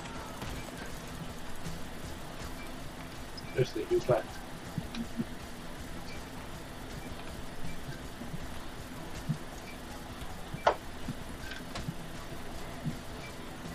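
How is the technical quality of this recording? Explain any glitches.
The technical quality of this recording is sound, with no glitches to explain.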